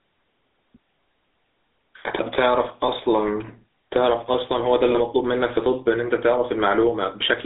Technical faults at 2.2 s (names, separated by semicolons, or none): gain pumping; GSM full-rate codec